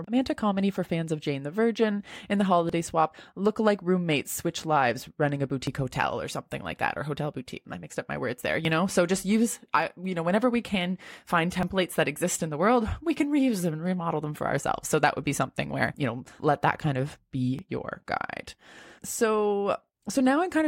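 Listen at 2.69, 5.67, 8.65, 11.63, 14.61 and 17.59 s and you'll catch a tiny skip in the speech each time, about 3 s apart. That's audio missing between chunks: it's likely the recorder handling the signal in 3-second blocks and dropping a sliver, roughly 20 ms, at each changeover. The two sides are butted straight together with no gap, so it comes across as a small jump.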